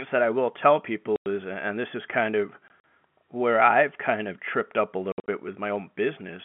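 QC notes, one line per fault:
1.16–1.26 s, packet loss filled with silence: after "that I will tell", a 100 ms hole with hard edges. Lost packets were replaced by silence; the length fits five 20 ms packets.
2.68–2.84 s, packet loss filled with silence: after "this is kind of", 60 ms of silence is scattered over 160 ms, with the longest gap 40 ms, before "where I've kind of".
5.12–5.28 s, packet loss filled with silence: after "of tripped up a", 120 ms drops out across 160 ms, with the longest gap 60 ms. Gap lengths point to 20 ms packets muted whole.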